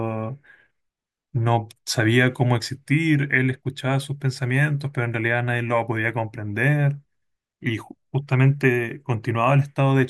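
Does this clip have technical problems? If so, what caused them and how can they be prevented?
No, no technical problems can be heard in this speech recording. Nothing needs to be traced to a cause, so there is nothing to prevent.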